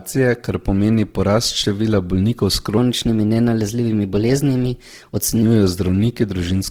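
Throughout, the speech sounds grainy and rough, likely from Opus compression at a low rate near 16 kbps. The spectrogram shows noisy, filled-in bands up to 20.3 kHz.

From 2.78 to 5.42 s, a section at the wrong speed runs 1.13 times fast, about two semitones higher, likely from a clock mismatch. Harmonics step upward and the waveform compresses.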